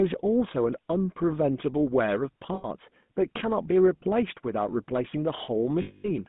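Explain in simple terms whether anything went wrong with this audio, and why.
Yes, two things went wrong. Throughout, the speech has passed through the GSM full-rate codec, the original mobile-phone voice coder. It rebuilds the voice from a simplified model driven by coarse pulses, so voices sound buzzy and gravelly, and nothing above about 3.5 kHz gets through.

There are also lost GSM frames, from 2.54 to 2.66 s and from 5.82 to 6.11 s. Where data went missing, the decoder repeated the last good sound. That leaves a short rough, metallic ring in place of real speech, about a tenth of a second first, then over a fifth.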